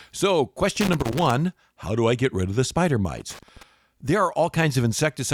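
Around 0.76 to 1.31 s, and again from 3.17 to 3.63 s, there's loose connector crackle on the speech: a worn or dirty contact keeps breaking and remaking, chopping the signal into an irregular, scratchy burst, each lasting about half a second.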